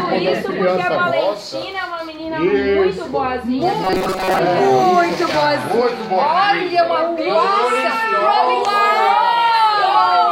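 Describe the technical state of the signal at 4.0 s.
At 4.0 s the sound has collapsed into a rigid, metallic buzz with a fixed pitch of 188 Hz that only loosely follows the original material. This is robotic sound from repeated short buffers, lasting from 3.84 to 4.39 s. The likely cause is audio arriving too seldom, so the playback keeps looping a slice of about 5.3 ms, one period of 188 Hz. Most of the real audio in that span, roughly two thirds, is skipped.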